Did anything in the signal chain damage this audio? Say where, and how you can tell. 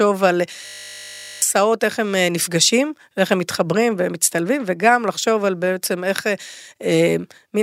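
Yes, at the driver or buffer stage. From 0.66 to 1.42 s the speech freezes into a steady 50 Hz buzz, a 20 ms slice repeating exactly. That's a system hang loop: the host stalled while the hardware kept replaying its ring buffer, and roughly 0.7 s of speech is lost.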